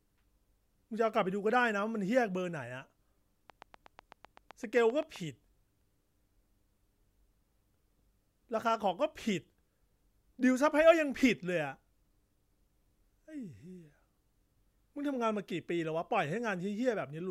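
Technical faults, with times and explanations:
3.50 to 5.17 s, train of clicks. A run of about fifteen near-identical clicks ticks over the speech for about 1.7 seconds. They arrive at a steady pace of about 7.8 per second. Their peaks reach roughly the level of the speech itself. Each pulse has the same sharp shape, which points to one repeating source. The likely cause is electrical interference from nearby equipment or a faulty connection or power supply.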